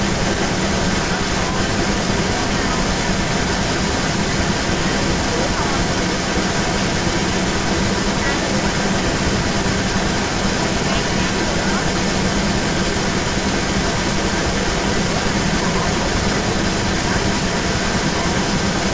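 Speech runs throughout with a delayed second copy trailing it by about 0.35 s, from start to finish and roughly 5 dB louder than the voice itself, over audio that tops out at 8 kHz. This is most likely an echo leak from a loudspeaker-side echo canceller failing to remove the returning sound.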